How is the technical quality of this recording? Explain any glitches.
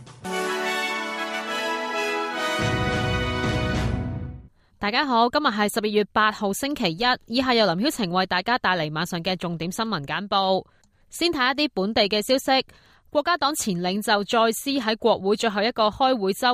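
No glitches, dropouts, clicks or other faults can be heard anywhere in the recording.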